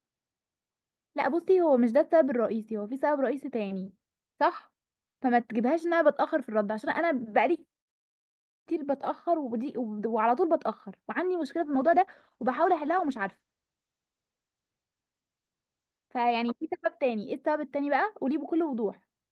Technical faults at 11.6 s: call bitrate drop

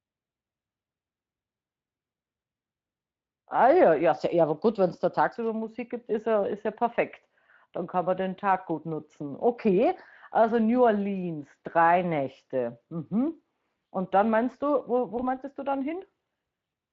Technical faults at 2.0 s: none

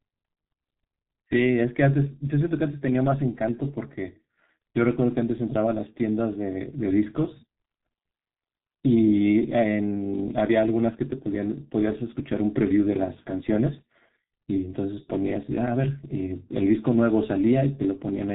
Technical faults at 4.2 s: G.723.1 codec

